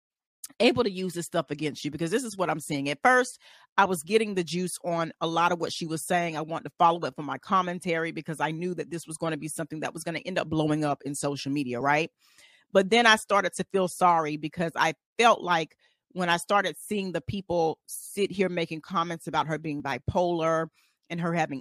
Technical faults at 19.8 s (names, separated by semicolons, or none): overlap between stream segments